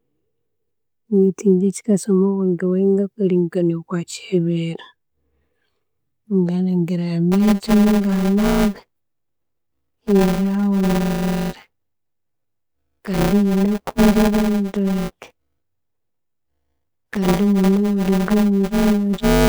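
Buffer tearing begins at 7.32 s and runs to the end of the clip. The process filling the ring buffer and the hardware draining it have drifted out of step, so their positions cross inside each period. About a fifth of every period is stale audio from roughly 10 ms earlier, spliced in with abrupt joins. The result is a robotic 200 Hz buzz, matching a 5 ms period, that rides on the speech whenever it is present.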